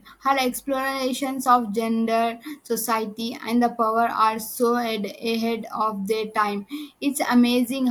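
No technical faults can be heard anywhere in the speech recording.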